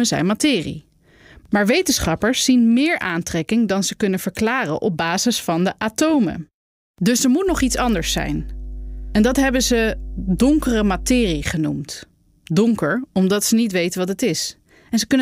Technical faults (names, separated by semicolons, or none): mains hum